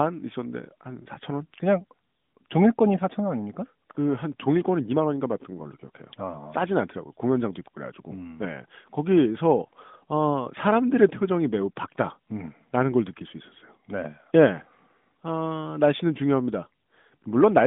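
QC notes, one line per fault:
Nothing stood out on listening, the speech coming through a narrowband mobile AMR-NB channel at around 12.2 kbps with nothing above about 3.7 kHz.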